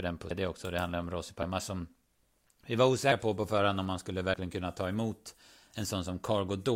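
At 0.30 s after "den på", then 1.42, 3.12 (before "på på förhand om") and 4.34 s, compressed frames are skipped: the speech jumps ahead about half a second, then roughly 150, 150 and 70 ms, multiples that fit 32 ms frames. At each join the waveform abruptly changes shape.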